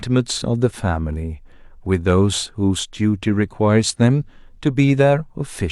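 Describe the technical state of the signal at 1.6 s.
At 1.6 s the signal is intact, with no audible fault at that moment.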